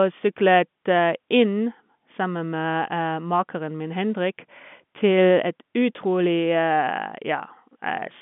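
No technical faults are audible.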